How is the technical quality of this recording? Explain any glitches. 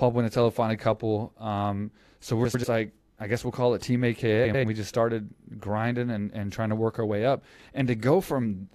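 The recording has two glitches, both frames out of order, at 2.44 to 2.65 s and at 4.44 to 4.64 s. In each, two adjacent runs of about 93 ms, which fits four frames apiece, were decoded in swapped order. The speech briefly flutters and garbles, and no time is lost. On a spectrogram or waveform, the patterns break off at the joins and pick up again out of sequence.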